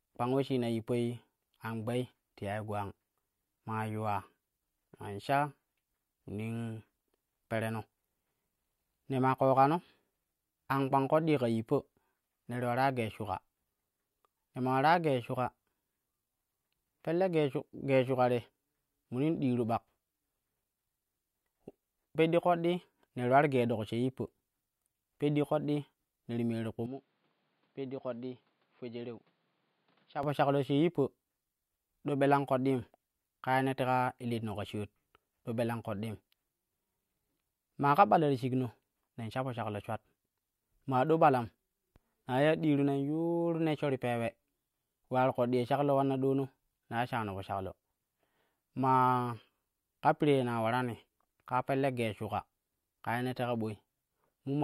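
From 26.86 to 30.23 s the speech abruptly turns duller and quieter, losing everything above 5.1 kHz, dropping roughly 10 dB, and gaining faint new background noise well under the signal. This is likely an input switched to a poorer device, with no silence at the switch.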